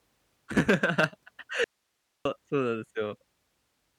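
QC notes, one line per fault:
1.64–2.25 s, audio dropout to a faint residue: the speech cuts off abruptly mid-flow and for about 0.61 s nothing remains but a low hiss, roughly 50 dB below the speech level, before the speech snaps back just as suddenly. The hard edges at both ends set it apart from a natural pause or a fade. The likely cause is a brief loss of the wanted signal while the path downstream stayed live, so the gap carries only the open input's own noise.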